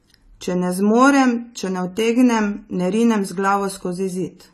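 Throughout the speech the sound is dull and smeared, with nothing above 14 kHz and a plainly audible warbling, fizzy texture on sustained sounds and sibilants. The likely cause is AAC compression: AAC-LC quantising its spectrum coarsely, consistent with a bitrate around 32 kbps.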